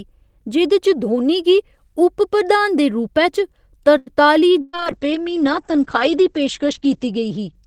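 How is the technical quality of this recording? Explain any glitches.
The recording has three network-related glitches in its second half, close together.

Short stall from a late packet, 3.97 to 4.24 s. A packet arrived late and the jitter buffer emptied, so the receiver stretched the last bit of speech for about 88 ms while it waited, then resumed exactly where it left off. Nothing is lost, but the sound hangs unnaturally long with a faint buzzy smear before normal timing returns.

Burst of packet loss, 4.61 to 4.76 s. Several consecutive packets never made it in time, leaving about 120 ms of speech missing. The receiver bridged roughly 118 ms of that by extending the preceding sound and fading it down, giving a held buzz or dimming hiss. When playback picks up again, the speech jumps ahead and skips the section that was lost.

Call bitrate drop, 4.65 s to the end. The connection's bandwidth estimate collapsed and the encoder went from 32 kbps down to 9 kbps, staying at its lowest for about 2.4 s. 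At that rate the audio band shrinks from 20 kHz to 8 kHz, so the speech loses its crisp top end and sounds muffled and coarse for the rest of the clip.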